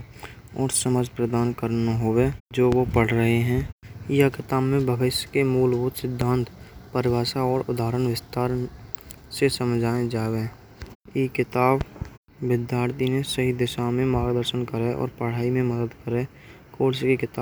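Loud pops at 2.72–2.75 s after "हुवे जो", at 6.21–6.24 s, and a double pop at 11.81–12.04 s between "हैं किताब" and "में तर दिए हैं" sound well above the speech, likely from voltage spikes.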